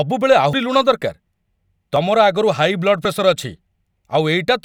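At 0.53 s the speech jumps abruptly, and about 70 ms of sound is missing; shorter skips of around 20 ms follow at 1.96 s and 3.05 s. This is most likely a dropped buffer (overrun), where audio was overwritten before being collected and the remaining ends were spliced together. On a waveform each point shows a sudden discontinuity without any gap, and a spectrogram shows a thin vertical broadband line.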